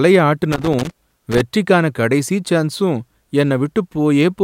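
From 0.52 to 1.41 s, just before "கடைசி சான்ஸும்", loose connector crackle breaks into the speech for just under a second. A worn or dirty contact is briefly making and breaking, so the signal is chopped on and off in rapid, uneven bursts, with pops where any DC on the line jumps. It differs from digital clicks or dropouts because the gaps are irregular and scratchy rather than evenly spaced, and the burst stops as soon as the contact settles.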